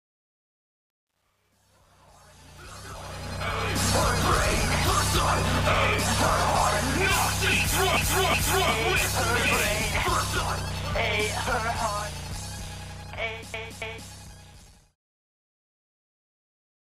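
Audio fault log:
0.00–3.88 s: truncation distortion on the fade. The fade-in ends at 3.88 s, but the stage behind it keeps only about 10 bits with no dither. The quietest stretch, 0.00–2.78 s, turns gritty as the waveform collapses onto a few coarse steps.
7.97–8.71 s and 13.54–14.10 s: repeated frames. A short block is played twice more each time: 0.37 s at 7.97 s, adding 0.74 s, and 0.28 s at 13.54 s, adding 0.56 s. These block lengths fit runs of four and three compressed frames. Each stutter loops the same fragment.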